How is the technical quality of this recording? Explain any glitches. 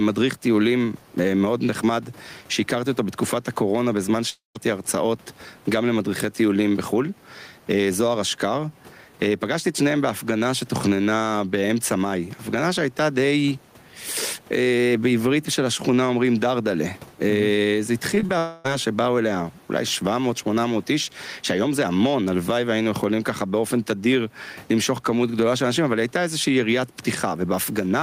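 The recording has three kinds of technical fault: constant level pumping, two long gaps in the audio, and a brief cluster of concealed packet losses.

Gain pumping runs through the whole clip, with roughly 10 dB of swing. The likely cause is input gain set too high, with a fast limiter clamping every peak. This flattens the dynamics and makes the sound feel squashed.

There are two long network dropouts, likely from audio that never arrived. From 4.29 to 4.57 s about 260 ms is missing. The receiver extends the last sound as a fading buzz or hiss, then leaves about 140 ms of near-silence. From 18.38 to 18.66 s a similar 260 ms gap is entirely filled by that decaying continuation. Both resume with the missing sound gone.

Short concealed packet loss appears just before the second dropout, at 18.15–18.18 s, 18.20–18.24 s and 18.26–18.30 s. About 20 ms is missing each time and is patched by extrapolating the preceding sound, which produces quick smears or wobbles in rapid succession. 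The room noise sits about 35 dB below the speech.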